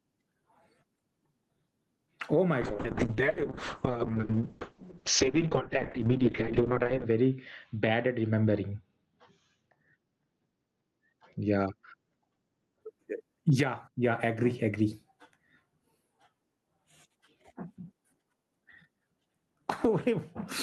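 Gain pumping runs through the whole recording, from the first second to the last. The level swings by roughly 15 dB. Loud and quiet passages sit unnaturally close together, giving the speech a squashed, flattened quality. The likely cause is input gain set far too high, with a fast limiter or compressor clamping down on each peak.

A call bitrate drop begins at 2.62 s and lasts until 12.87 s. The encoder was starved of bits after the connection's bandwidth estimate fell, which fits a slide from about 32 kbps to around 6 kbps. The speech turns rough and watery, and the top end disappears as the audio bandwidth narrows from 20 kHz to 8 kHz, leaving it muffled. The coarsest stretch holds for about 4.4 s before quality recovers.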